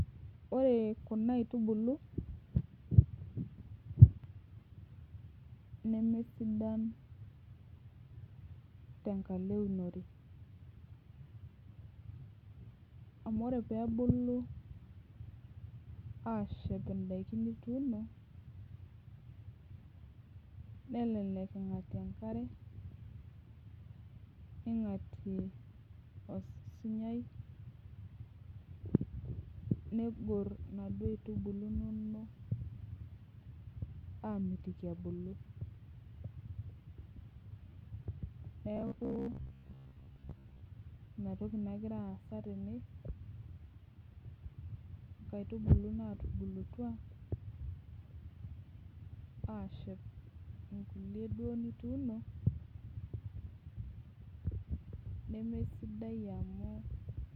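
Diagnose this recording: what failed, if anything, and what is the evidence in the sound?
Between 38.77 and 40.63 s, just before "ina toki", the speech collapses into robotic sound from repeated short buffers: a rigid metallic buzz at 66.8 Hz that loosely tracks the speech. The stage is likely the driver or buffer layer, starved so that about 15 ms blocks get replayed, with roughly half the audio re-used and the rest skipped. A spectrogram shows a fixed comb of harmonics spaced 66.8 Hz apart; the waveform shows identical segments repeating every 15 ms.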